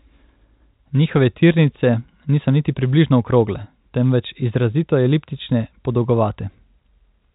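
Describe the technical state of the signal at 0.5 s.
At 0.5 s the signal is intact, with only the ordinary band limit of G.711 telephone coding, which leaves nothing above about 3.8 kHz.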